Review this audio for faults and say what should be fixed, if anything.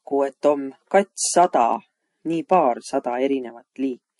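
The speech sounds dull throughout, with nothing above about 11.3 kHz, and there are two layers of artefacts at once, heard together. The likely cause is transcoding between lossy codecs, which fits a low-bitrate MP3 later re-encoded to Vorbis at a similar rate. The second encoder spent bits reproducing the first one's damage and added its own. To prevent this, encode once from the original source rather than re-encoding an already-compressed file.

From 1.14 s to 4.13 s there is a steady train of ticks, one every 0.1 s, about thirty in all, heard only while speech is present. These are periodic USB or driver dropouts. At a fixed interval, something stalled the audio path, and a tiny sliver of audio, well under a millisecond, was skipped outright, leaving a small discontinuity in the waveform each time. To prevent this, find and stop the background task that blocks the bus or driver, or record with a larger buffer.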